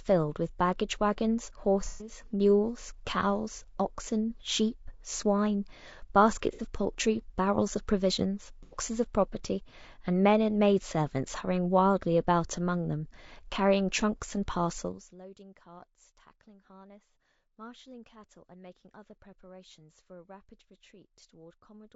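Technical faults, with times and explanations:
Throughout, low-delay AAC compression: The sound is rough and grainy, with noise filling the gaps between harmonics and a thin, somewhat synthetic top band. This is likely AAC-ELD, the low-delay codec of video calls, running at a low rate that fits about 32 kbps. Its short frames resolve pitch harmonics poorly, so the damage is a steady texture across the whole clip rather than a brief event.
1.85 to 2.12 s, 6.53 to 6.61 s and 8.63 to 8.77 s, AAC frame loss with concealment: Three brief patches turn smeared, noisy or phasey. They last about 150 ms, 60 ms and 90 ms, which fits runs of five, two and three lost frames. Each time the decoder rebuilt the gap from the last good spectrum, so the sound blurs rather than dropping into silence. The damage is confined to those moments, unlike the constant codec roughness.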